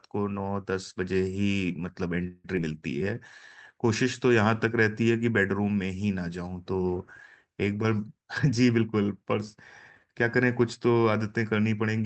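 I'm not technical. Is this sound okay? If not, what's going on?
No, there are three glitches. At 2.27 to 2.46 s there's a call audio freeze: the sound stalls into a fading buzz for about 0.17 s, likely because packets arrived late, then carries on where it left off. Right after, at 2.56 to 2.59 s, a skip ahead drops a tiny slice, under a tenth of a second, so the speech jumps forward. From 8.2 to 9.57 s a jitter buffer speed-up makes the speech run about 11% faster at the same pitch, sounding a bit rushed.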